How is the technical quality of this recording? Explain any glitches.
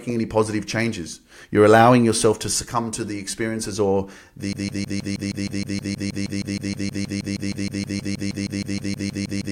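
A broken-record loop takes over the recording at 4.53 s and runs to the end. From that point a fragment of speech about 0.16 s long repeats exactly, back to back, some 32 times, giving a rapid, mechanical stutter in place of continued speech. This is likely a stall in the player, encoder or stream, which kept resending the last piece of audio it held. Whatever was said after 4.53 s is lost and cannot be recovered from this clip.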